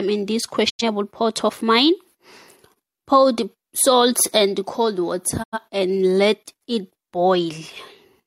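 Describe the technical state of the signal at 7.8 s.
At 7.8 s the signal is intact, with no fault present at that point.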